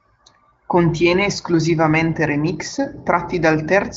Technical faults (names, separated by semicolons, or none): none